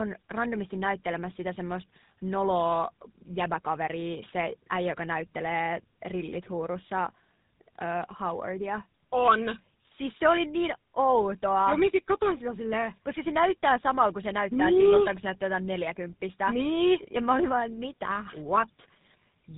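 From start to finish the speech carries tandem speech coding: two low-rate speech codecs in sequence, with a transparent telephone-rate hop between them, which fits an AMR-NB leg feeding a GSM full-rate leg. The second coder re-encodes the first one's errors, so the speech sounds rougher and more warbly than one codec alone would. Nothing reaches above 3.8 kHz, yet the compounded burbling distinguishes it from simple narrowband filtering.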